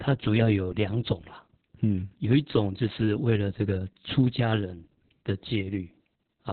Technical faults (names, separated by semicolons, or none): Opus voice compression